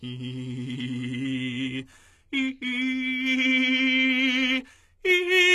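HE-AAC compression throughout the music: nothing sounds above 12.2 kHz, and the treble, likely rebuilt from copied lower bands, comes across plainly gritty and metallic.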